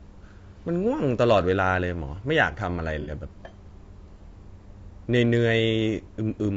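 From start to end, the speech is rough and grainy, with noise between the harmonics, and the top band sounds thin and synthetic. This is plainly audible damage, likely from low-delay AAC compression such as AAC-ELD, at a rate that fits about 32 kbps.

From 3.02 to 3.11 s there is AAC frame loss with concealment. About 60 ms of audio went missing, which fits two lost frames. The decoder filled the gap from the last good spectrum. The patch sounds smeared, noisy or phasey.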